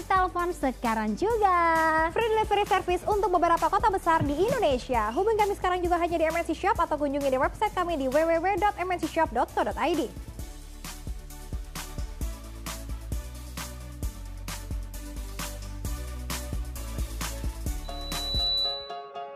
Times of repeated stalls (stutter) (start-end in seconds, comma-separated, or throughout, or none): none